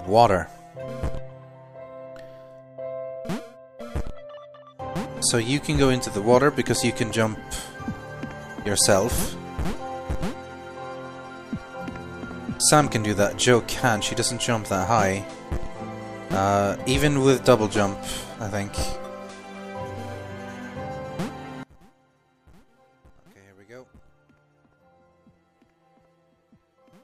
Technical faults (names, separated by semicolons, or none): one channel inverted